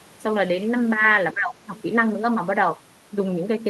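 From 1.33 to 1.70 s, the speech drops sharply, by around 20 dB. This is speech suppressed in double talk, likely an echo canceller ducking overlapping talk.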